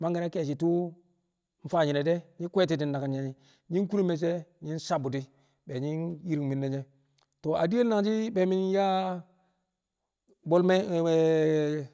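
Nothing in the speech stood out as a technical fault on listening.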